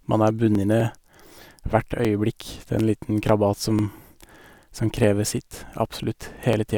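From 0.06 s to 6.53 s, periodic USB or driver dropouts skip about a millisecond of speech every 0.25 s, some thirty times. Each shows as a waveform discontinuity and a thin vertical broadband line on a spectrogram, heard as evenly spaced ticks.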